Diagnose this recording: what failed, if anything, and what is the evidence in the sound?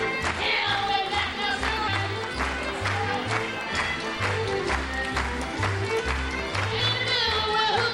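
At 1.87 s and 6.79 s the sound lurches ahead with a brief smeared blip, not a hard click, losing around 150 ms and then 200 ms. These are compressed frames skipped at the codec stage. Whole frames, consistent with 20 ms frames, went missing or were rejected as damaged, and overlap between neighbouring frames softens each join.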